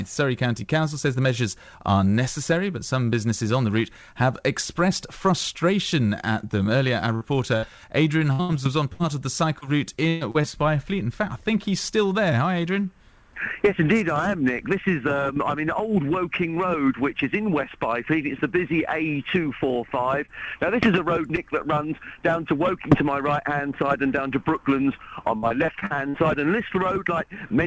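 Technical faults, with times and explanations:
7.15 to 7.23 s and 7.57 to 7.65 s, burst of packet loss: Two short runs of lost packets fall close together. Each is about 60 ms long. In each one the receiver kept the last sound going and turned it down, so there is a brief held buzz or fading hiss. Playback then picks up again further on. About 60 ms of the original is gone at each point, so the sound jumps ahead.
8.33 to 10.45 s and 25.37 to 26.16 s, repeated packet loss (robotic sound): Packets drop again and again in both stretches, with seven holes in each. The receiver patches each hole by carrying on the last sound, and then the next hole arrives. The first stretch loses about 400 ms in total, with the longest hole about 120 ms. The second loses about 220 ms, in holes of up to 50 ms, and about a quarter of that span is patched. Both come out choppy, with pieces missing.
20.25 to 20.30 s and 21.36 to 21.39 s, short concealed packet loss: Two small holes, each about 20 ms, never reached the decoder in time. 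The receiver extended the preceding sound and blended back into the real audio. Each is heard as a quick smear or wobble rather than a clear gap. A short sound at either point can be lost. The audio comes through a call path with nothing above 8 kHz, which fits a G.722 codec at 64 kbps.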